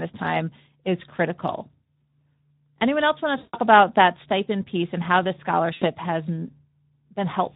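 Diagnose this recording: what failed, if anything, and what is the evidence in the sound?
The damage starts at the codec stage and runs through all of the speech. It has the hoarse, grainy quality of the Speex codec pushed to a low quality setting, and the artefacts are plainly audible. The sound points to a rate around 11 kbps. At that rate the CELP coder has too few bits to describe the excitation properly, so the voiced sounds lose their natural texture and pick up that noisy, rough edge.

On top of that, there's VoIP packet loss concealed by the speech codec, a network-stage fault. The first gap runs from 3.37 to 3.57 s, right after "else want" and before "about that stipend piece". It covers about 160 ms of lost audio. The second runs from 5.73 to 5.85 s, after "piece and how this", and covers about 80 ms. Both times the decoder keeps extending its last pitch and filter at a falling level, so the sound is stretched out and fades. 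The speech stays weak for a moment after the packets come back.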